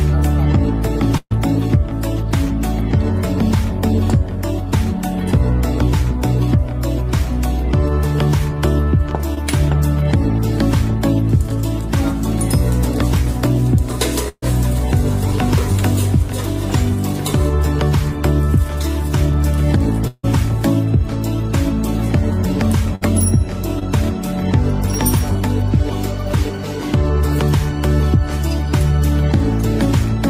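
At 1.17 to 1.33 s, a burst of packet loss drops about 140 ms of audio. The receiver continues the last sound for roughly 130 ms, fading it as a held buzz or hiss, with a brief silence before the sound resumes further on.

At 9.35 to 9.39 s, short concealed packet loss leaves a 20 ms hole that the decoder fills from the preceding sound and blends back, heard as a quick smear or wobble.

At 14.29 to 14.44 s, another burst of packet loss removes about 140 ms. The same fading continuation and short silence follow.

At 20.07 to 20.25 s, 160 ms goes missing, likely a long network dropout. It is heard as a continued, decaying buzz or hiss ending in a brief silence before the sound jumps ahead.

At 22.95 to 23.03 s, a shorter burst of packet loss drops about 60 ms, bridged by a short fading fill.

At 23.79 to 23.83 s, short concealed packet loss patches 20 ms, leaving a brief wobble.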